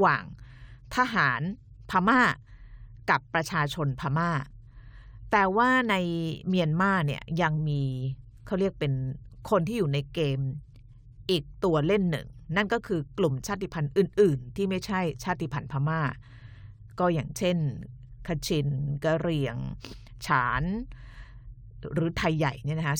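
Throughout the speech there is imaging from linear upsampling, consistent with a rate raised from 22 kHz to 44.1 kHz by straight-line interpolation. Highs sound dulled, with faint metallic shimmer on sibilants. A spectrogram shows a mirrored copy from 11.03 to 22.05 kHz, roughly 35 dB down.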